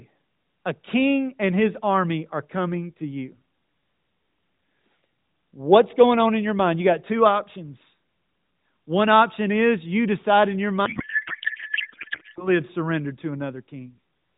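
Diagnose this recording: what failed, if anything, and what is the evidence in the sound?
A codec payload misread fails at the codec stage, between packetisation and decoding. From 10.86 to 12.50 s the speech gives way to garbled noise and warble that barely tracks it. Around this stretch the audio carries the band-limited, slightly synthetic character of AMR narrowband at 12.2 kbps. Packet loss concealment would fade or repeat the preceding sound. Here the decoder keeps producing confident output from misplaced bits, which fits octet-aligned AMR frames being parsed as bandwidth-efficient ones.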